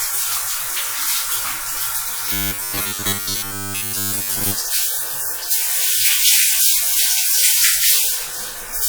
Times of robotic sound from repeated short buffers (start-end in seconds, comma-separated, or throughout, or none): 2.32-4.55